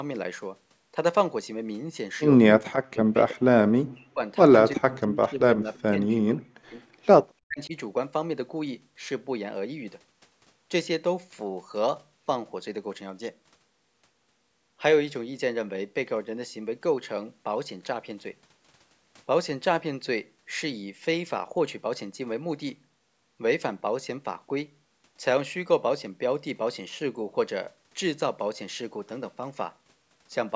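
Speech suppressed in double talk hits this speech recording at 2.6–3.16 s, 3.86–4.23 s, 4.75–6.8 s and 7.47–7.74 s: the voice drops by roughly 40 dB, likely because an echo canceller turned down both its own talker and the loudspeaker echo. Echo leak appears at 5.77–5.82 s as a faint scrap about 40 dB down, delayed 337 ms, likely residual loudspeaker echo that slipped past cancellation.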